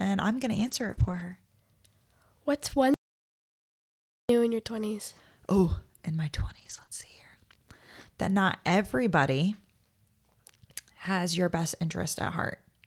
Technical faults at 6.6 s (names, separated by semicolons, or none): lost packet rebuilt from error correction